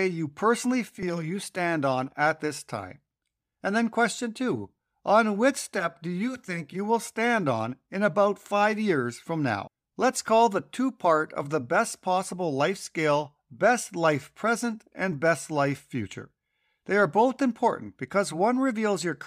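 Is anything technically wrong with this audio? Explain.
No, no technical faults heard.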